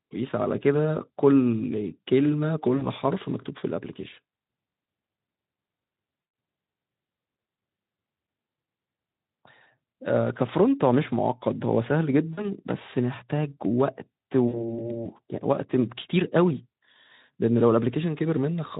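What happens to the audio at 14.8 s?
At 14.8 s the speech is near the end of a VoIP packet loss concealed by the speech codec, running from 14.47 to 14.83 s. About 60 ms of packets went missing. The decoder extrapolated from its last pitch and filter at falling gain, so the sound smears into a fading buzzy tone or coloured noise, and the recovery stays weak or distorted after packets resume.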